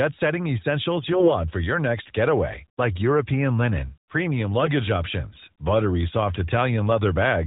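A hoarse, gargly scratchiness breaks into the speech from 1.12 to 1.34 s and again, more briefly, from 4.58 to 4.71 s, while pitch and loudness hold roughly steady. These are AMR bit errors: the less protected bits of AMR narrowband mobile codec frames arrived flipped at a rate of a few percent, so the decoder misplaced its excitation pulses and drifted the fine pitch, gain and spectral values.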